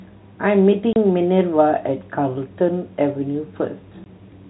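At 0.93 s the speech drops out for 30 ms, and at 4.04 s for 20 ms. Both gaps are packet loss filled with silence: the receiver lost audio in transit and played nothing in its place. Both lengths are multiples of 10 ms, which fits 10 ms packets. Each gap starts and stops abruptly, unlike concealment that smears the gap. The narrow telephone band of the G.711 coding stays steady across both holes.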